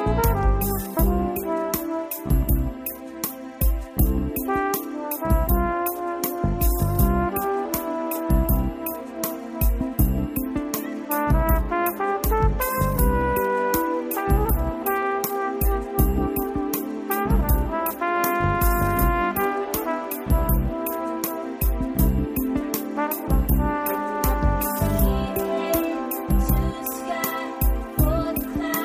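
No technical fault can be heard in this audio; the signal stays steady and intact throughout.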